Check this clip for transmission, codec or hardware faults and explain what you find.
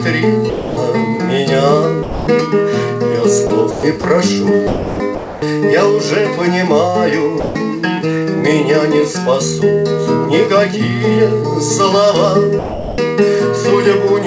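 Two kinds of voice-activity fault are audible, on a call path whose band stops at 8 kHz, consistent with G.722.

Sound dropped by the voice detector occurs at 0.50–0.77 s, 2.03–2.27 s, 7.40–7.55 s and 12.59–12.98 s. Each time the sound gives way to steady comfort noise for 150–390 ms, then returns. The likely cause is the sender's detector misjudging low-level sound as background and halting transmission.

Sound chopped by the voice detector appears at 3.47–4.04 s and 4.67–5.42 s. About 180 ms and 600 ms respectively are replaced by comfort noise, broken into pieces, so the sound is choppy. The likely cause is a detector toggling repeatedly between sending and muting.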